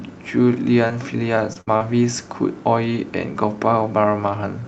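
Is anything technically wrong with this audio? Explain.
Yes, the call dropped packets, once as a longer burst and three times in shorter bursts, all within about a second.

Short concealed packet loss occurs at 0.87, 1.53 and 1.77 s. Each is a brief smear or wobble of roughly 40 to 60 ms. About 20 ms of audio is missing at the first two and about 40 ms at the third. The receiver filled each gap by extending the preceding sound, then blended back into the real signal.

A burst of packet loss runs from 1.61 to 1.69 s. The sound stretches into a held, fading buzz or hiss, then resumes further along. About 60 ms of audio is lost because packets were lost or came too late and the receiver could only continue and fade the last sound.

Nothing is heard above 8 kHz, which fits the wideband call codec along the path.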